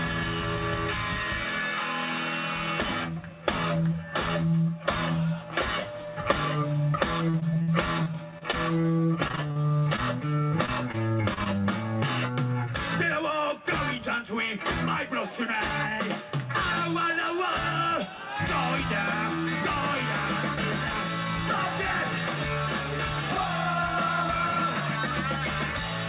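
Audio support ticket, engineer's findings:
Repeated packet loss (robotic sound), 7.3 to 8.86 s: choppy stretch with 10 gaps, longest 59 ms, about 16% of the span patched by extending the last sound. Probable component: network/receiver concealment. Different from the 4 kHz G.711 mu-law band limit, which is steady; this breaks up.

Same fault, 9.28 to 10.0 s: 8 gaps, longest 41 ms, about a quarter concealed.

Same fault, 10.66 to 11.6 s: 6 gaps, longest 31 ms, about 14% concealed.

Jitter buffer speed-up, 13.08 to 14.22 s: audio runs about 4% fast, at unchanged pitch. Probable component: receiver jitter buffer trimming excess delay by dropping pitch-period slices, roughly 50 ms in total. Unlike a sample-rate mismatch, pitch does not rise. Unlike packet loss, nothing drops out.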